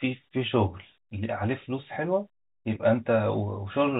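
At 2.75 s, packet loss with the last packet repeated: about 10 ms, which points to a single lost packet, was filled with a copy of the previous audio. The join sounds like a small blip rather than a silent gap, which is how it differs from a plain dropout. Heard through the 4 kHz-limited G.711 telephone coding.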